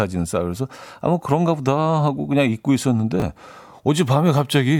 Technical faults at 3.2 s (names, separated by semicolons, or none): chunks out of order